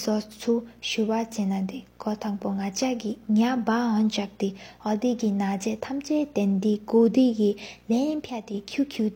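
Video or display buzz runs through the whole speech clip. A screen or video cable is coupling into the audio path. It is heard as a steady 60 Hz buzz, the picture's field rate, with hash above it. It sits roughly 30 dB below the speech.

At 8.30 s there is a sudden gain jump. The level drops by about 6 dB at once and stays down until 8.54 s. Speech and background noise fall together. The likely cause is a digital gain change applied with no ramp.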